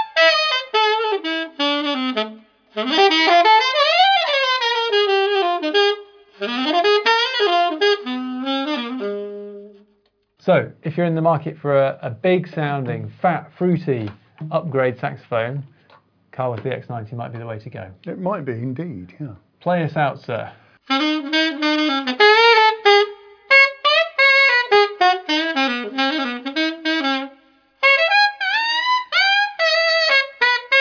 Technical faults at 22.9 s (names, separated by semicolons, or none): none